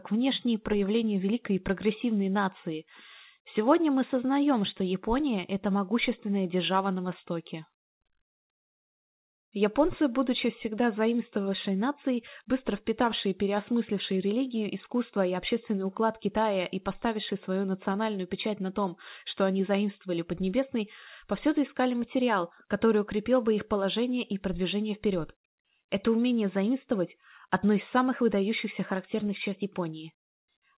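The audio carries no technical faults, and what can be heard of the call path is the narrow telephone band that fits G.711 mu-law coding, with nothing above 4 kHz.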